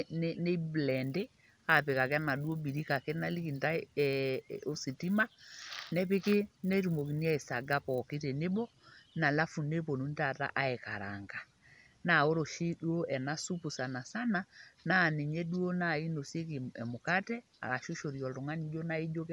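Speech, with a resampler restarted on every block from 0.89 to 8.14 s. Each 10 ms block is converted without its neighbours during upsampling from 24 kHz to 48 kHz, so edge errors produce a 100 Hz buzz only while speech is present. A spectrogram shows vertical striations every 10 ms, and the waveform shows small steps at block edges.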